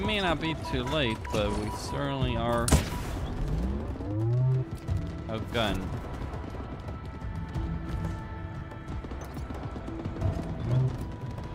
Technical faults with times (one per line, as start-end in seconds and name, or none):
8.59-8.61 lost LE Audio frames